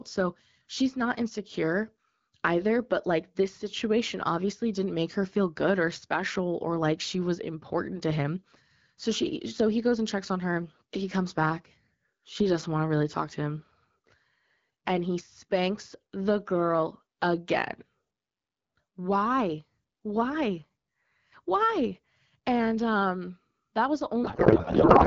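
From 24.24 s, just after "um that was", to the clip's end at 25.07 s, a codec payload misread turns the speech into garbled noise and warble that barely tracks it. Octet-aligned AMR-WB frames are being read as bandwidth-efficient, so every field lands in the wrong place.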